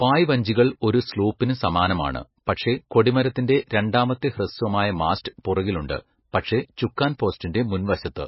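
Throughout the speech, heavy damage from likely MP3 compression: nothing above 5.6 kHz and swirly, watery artefacts fitting roughly 18 kbps, unlike a clean low-pass filter.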